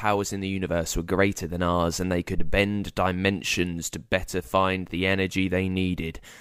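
Speech recording with a phantom power thump from 2.38 to 2.62 s: a deep low-frequency thump peaking at about -13 dBFS and dying away within roughly 53 ms. It comes from a supply being switched on or off on the live input, its voltage step passing through the coupling capacitors.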